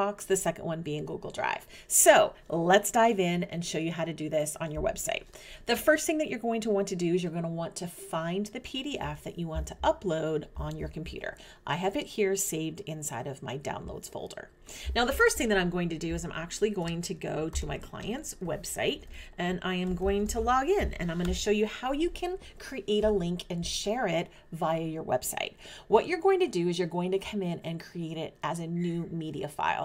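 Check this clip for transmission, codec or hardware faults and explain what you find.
No transmission, codec or hardware faults are audible anywhere in the clip.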